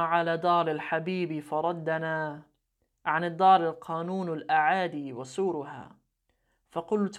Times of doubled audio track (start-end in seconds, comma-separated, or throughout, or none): none